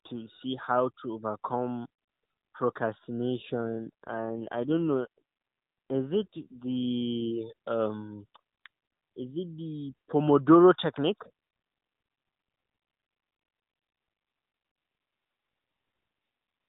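A speech recording carried over a narrowband AMR mobile link, with nothing heard above 4 kHz. From 3.54 to 7.31 s an AMR rate drop occurs: the network has the codec fall back to a lower mode, one that fits a step from 12.2 kbps down to about 5.9 kbps, spending the saved bits on error protection. There is no gap and no change in bandwidth, but the voice turns rougher and more buzzy and synthetic until the higher rate returns.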